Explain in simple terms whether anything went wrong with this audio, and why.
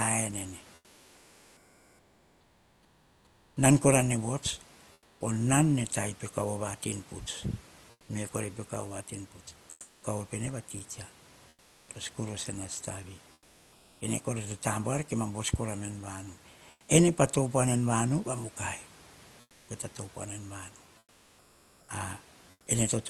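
During the pauses at 0.61–5.21 s, 7.91–14.01 s, 16.71–16.89 s and 19.41–22.67 s, the real room background gives way to comfort noise: a flat, featureless hiss. The likely cause is the call codec going quiet between phrases, with the receiver filling in synthetic noise.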